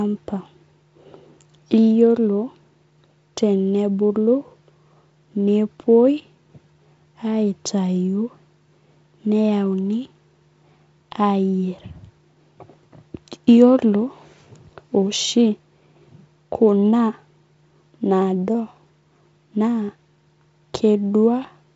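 Speech comes through G.722 wideband telephone coding at about 48 kbit/s, with nothing above roughly 7.7 kHz and only the light coding hiss that this rate brings, and no technical fault can be heard.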